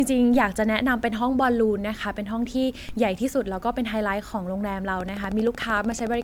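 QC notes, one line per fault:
throughout: generation loss, likely from repeated MP3 re-encoding at around 132 kbit/s; swirly, hollow smearing and blurred attacks beyond what one encode would cause, with nothing above 19.9 kHz.
0.34 s, 2.89 s: DC step, the zero line jumps and the offset decays away through a 5 Hz high-pass; a single low thump each time, unlike clicks, with speech continuing unchanged.
5.01–6.23 s: train of clicks, about fifteen near-identical pulses at a regular 13.2 per second, about 5 dB above the speech; a steady ticking, unlike isolated thumps, likely from electrical interference.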